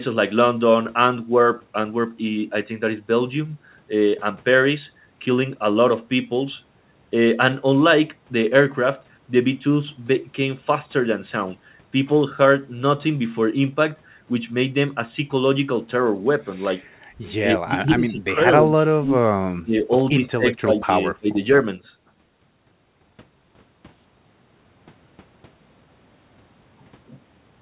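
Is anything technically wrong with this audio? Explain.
Yes, there are two problems, both on a speech recording carried over a narrowband call path whose sound stops at 4 kHz, which fits G.711 mu-law at 64 kbps.

Echo leak, 16.81 to 16.98 s: a brief, very faint delayed copy of the speech, lagging by 188 ms and sitting far below the main voice. The likely cause is a far-end loudspeaker whose echo canceller let a scrap of the played-back audio reach its microphone, so it returned down the line.

Speech suppressed in double talk, at 17.41 to 18.41 s, 18.61 to 19.19 s, 19.63 to 19.87 s, 20.17 to 20.9 s and 21.11 to 21.39 s: the voice repeatedly sinks, falling by roughly 15 to 25 dB at its deepest. The likely cause is both sides talking at once, with the echo canceller unable to tell the local talker from loudspeaker echo and turning everything down.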